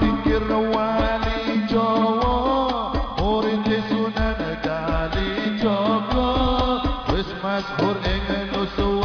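Nothing in this one stands out as a technical problem; the audio holds together without any dropouts, glitches or distortion catching the ear along the way.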